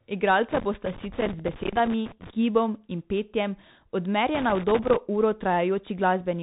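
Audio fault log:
throughout, Bluetooth CVSD headset codec: muffled, narrowband sound with scratchy s sounds and granular hiss; the one-bit delta coder, which fits 64 kbps, passes nothing above 3.8 kHz.
0.50–2.30 s and 4.35–4.96 s, loose connector crackle: irregular bursts of crackling and scratching as a faulty contact rapidly makes and breaks, chopping the signal.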